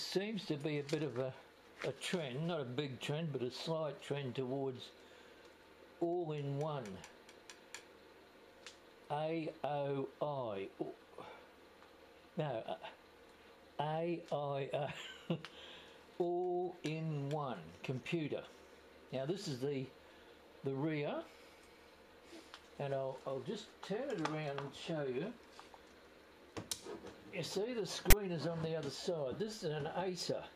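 File tags played as audio, from 28.10 to 28.13 s: a block of text metadata was decoded as if it were sample data, giving a brief, hard-edged burst of loud rasping static pushed off-centre, because character bytes map to sample values clustered to one side.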